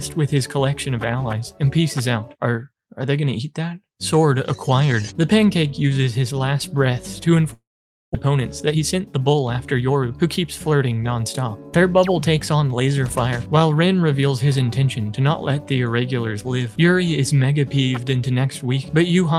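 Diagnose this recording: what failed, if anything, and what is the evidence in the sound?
Network stage: long network dropout. From 7.53 to 8.16 s, the sound decays into a fading buzz, then silence. About 400 ms was likely lost in transit.

Buffer stage: jitter buffer speed-up. From 8.26 to 10.17 s, audio runs 10% fast at the same pitch. Removed pitch periods drain roughly a fifth of a second of backlog.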